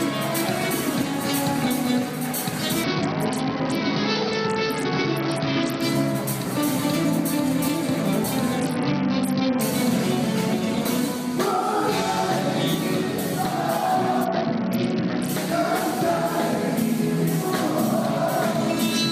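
At 2.84 to 5.82 s, 8.60 to 9.61 s and 14.24 to 15.29 s, a Bluetooth SBC bit pool drop dulls the treble and adds gritty noise, which fits a fall from bit pool 31 to 7 (about 61 kbps). A spectrogram shows the upper bands thinning out.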